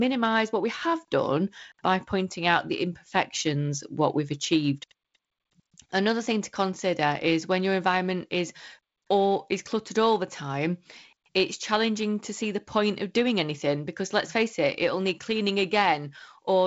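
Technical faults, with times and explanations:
The speech carries the sound of G.722 wideband telephone coding, with content reaching to about 7.7 kHz and nothing above it, and a light hiss in the upper band alongside slightly grainier low-band detail that fits one of the reduced bitrates such as 48 kbit/s.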